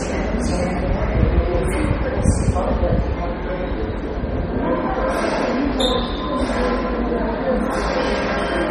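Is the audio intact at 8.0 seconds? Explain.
No. At 8.0 seconds, as throughout, the audio carries heavy damage from what is likely MP3 compression at a very low bitrate, consistent with about 32 kbps. Short of bits, the encoder cut everything above 12.1 kHz and dropped the weaker frequency lines, which flicker on and off between frames. At this moment, the sound is dull, watery and swirling, with metallic chirps on sharp high detail and smeared attacks.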